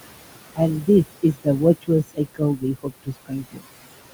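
Noise suppressor artifacts run through the whole clip. The suppressor treats the steady room noise, which sits about 12 dB under the speech, as something to remove. It pulls that noise down by about 20 dB, band by band, frame by frame. So the background drops away in the pauses and climbs back up under the speech.

From 2.1 s to 3.66 s there is speech cut by the noise suppressor. Here it mistakes parts of the speech for noise and lowers them along with the background. The deepest drop is about 21 dB. Across that stretch, roughly 0.7 s of speech is affected in all. Soft consonants and word endings sound swallowed, and quieter moments sound faint.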